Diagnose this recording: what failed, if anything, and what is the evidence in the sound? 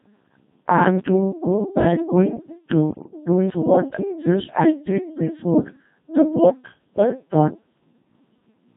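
Robotic, buzzy speech runs through the whole recording, with heavy codec damage: the Codec 2 vocoder at the codec stage, in what sounds like its 2.4 kbit/s mode. The decoder rebuilds each frame from sine waves using only pitch, voicing, energy and spectral envelope, discarding the original waveform.

From 2.90 to 3.12 s the synthetic voice lurches in pitch, level and timbre and breaks into warbling gibberish. These are bit errors on the digital voice radio link, at a rate near one bit in ten. They corrupt the parameters of several consecutive vocoder frames.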